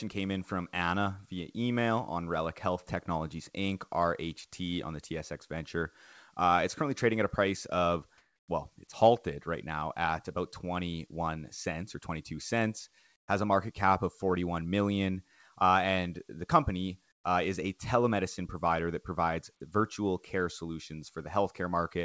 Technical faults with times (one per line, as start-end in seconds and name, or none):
8.18-8.48 comfort noise in place of the background
13.16-13.28 comfort noise in place of the background
17.12-17.24 comfort noise in place of the background